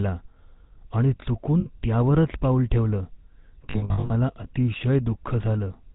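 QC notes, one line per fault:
Throughout: GSM full-rate codec. The speech carries the plainly audible buzzy, gravelly roughness of the original GSM coder at 13 kb/s. It rebuilds the voice from a vocal-tract model excited by regularly spaced pulses, keeping only one in three excitation samples, so the fine texture of the source is replaced by a coarse, rasping buzz. Nothing above 4 kHz gets through, leaving the sound dull and band-limited.
1.60–1.66 s: lost GSM frames. A brief gap of about 60 ms, just before "त्यावरच पाऊल ठेवलं", where the decoder held the parameters of the last good frame. The result is a short metallic ring smeared over that instant instead of the real sound. The duration fits three 20 ms frames.
3.70–4.11 s: lost GSM frames. Repeated dropouts scattered across about 400 ms, totalling 280 ms of missing audio, with the longest unbroken stretch around 70 ms. Each dropout is again filled by repeating the last good frame, so the passage turns into a stuttering, rough, metallic warble. 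None of the runs lasts long enough to fade fully to silence before good frames resume.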